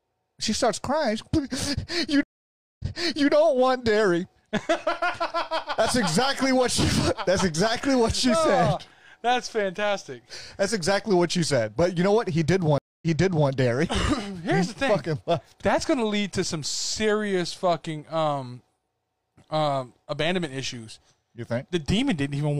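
At 2.23 s and again at 12.78 s, a stream reconnect breaks the audio: a flat gap of 563 ms, then 242 ms, shows as blank columns in the waveform and spectrogram. A fresh decoder resumes about 0.51 s and 0.46 s earlier, so material repeats.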